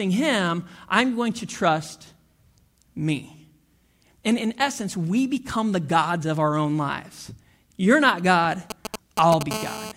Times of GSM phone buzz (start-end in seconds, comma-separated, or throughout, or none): 9.51-9.92